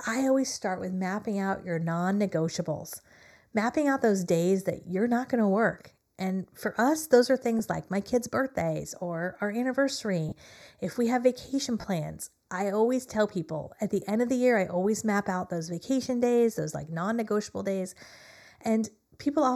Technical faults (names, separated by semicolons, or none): channel delay (comb filtering); lost LE Audio frames